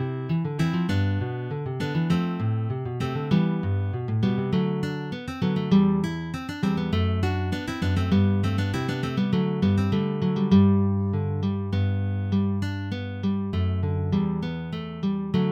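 No faults can be heard anywhere in this audio.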